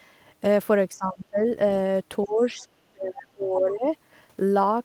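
A short speech clip where the talker gets squashed twice. From 0.94 to 1.4 s, and again from 2.25 to 3.87 s, the voice sinks by something like 20 to 25 dB. That's speech suppressed in double talk, likely an echo canceller ducking everything while both ends spoke at once. Right at the start of that second stretch, 2.25 to 2.42 s, there's a faint scrap of the other side's voice leaking through, way down at roughly 30 dB below the talker, likely loudspeaker echo the canceller didn't fully remove.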